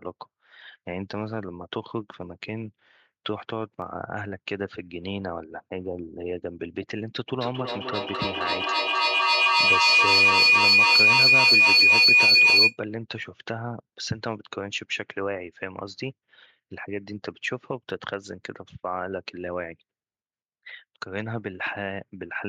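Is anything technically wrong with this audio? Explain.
Yes, there are two kinds of fault in this speech clip.

At 3.82 s and again at 17.9 s there is a single sharp click, a brief tick laid over the speech. These are likely dropped samples: a tiny fraction of a millisecond of audio is missing, so the waveform jumps straight from one value to a later one. That gap is far too short to remove any sound, but the sudden step produces a broadband click, which shows as a thin vertical line in a spectrogram.

From 7.36 s to 12.8 s a feedback howl builds up, a piercing tone around 3 kHz that swells and pulses roughly every third of a second and peaks at about 13 dB above the speech. It comes from two devices on the same call sharing a room. Each trip from microphone to loudspeaker and back adds level, so the repeats grow instead of dying away and narrow to the frequency the loop favours. The pulsing matches the loop's delay, and the howl persists until the loop is broken.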